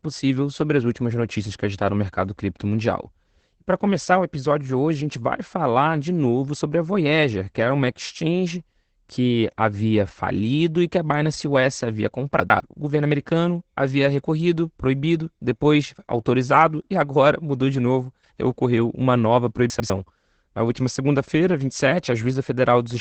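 Throughout the recording the speech sounds muffled and hoarse, with a faint robotic edge and nothing above about 8.6 kHz. This is Opus voice compression in its SILK mode, coding wideband speech at a low rate, which fits a bitrate around 12 kbps. The linear-prediction coder captures the broad shape of each 20 ms frame but describes the excitation underneath only coarsely. That thins out the breathiness and texture that would make the speech sound natural.

At 12.4 to 12.6 s the speech briefly jumbles, as if a fragment skipped ahead and then doubled back. The same happens at 19.7 to 19.9 s, right after "novo ocorreu uma nova". In both places the chunks are out of order. A 100 ms chunk arrived one chunk late and plays after the one that should follow it. Nothing is lost, but the wrong sequence leaves three hard joins.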